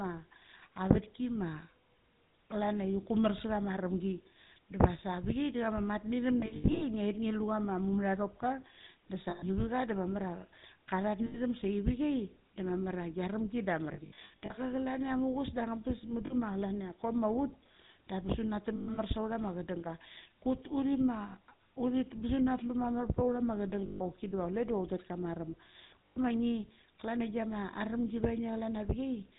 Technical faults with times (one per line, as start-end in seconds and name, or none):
0.00-29.39 GSM full-rate codec
6.40-6.83 lost GSM frames
9.30-9.43 lost GSM frames
11.26-11.39 lost GSM frames
13.94-14.54 lost GSM frames
16.26-16.34 lost GSM frames
18.76-18.98 lost GSM frames
23.86-24.02 lost GSM frames
26.07-26.18 lost GSM frames